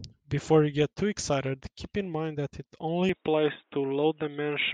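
From 3.09 s the speech turns dull and boxy, losing everything above 3.8 kHz without a gap: likely an input switched to a poorer device.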